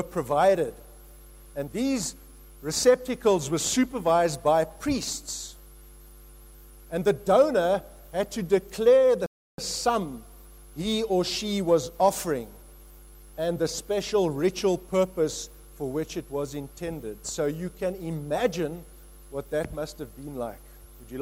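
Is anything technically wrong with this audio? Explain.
Yes. At 9.26 s the sound drops to silence for 0.32 s, then resumes exactly where it stopped: a rebuffering stall, where playback ran dry awaiting more downloaded data.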